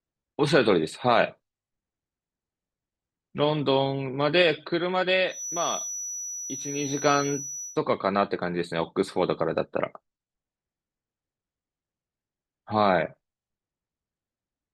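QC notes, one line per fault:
5.26–7.80 s, feedback whistle: a thin, steady tone near 5.9 kHz sits roughly 10 dB under the speech, likely a loudspeaker-to-mic loop hovering just short of runaway.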